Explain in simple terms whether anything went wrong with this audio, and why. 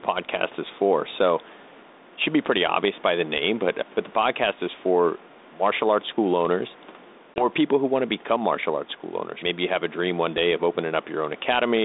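Two things went wrong. Throughout the speech there is gain pumping: loud and soft parts are squashed closer together in level. This is likely a fast limiter reacting to a microphone level set too high.

At 7.34 s, between "martial arts school owners" and "people who want to", there is packet loss on an ADPCM call. About 20 ms of audio drops to silence, and the decoder loses track of the level, so the speech comes back slightly off until about 7.45 s.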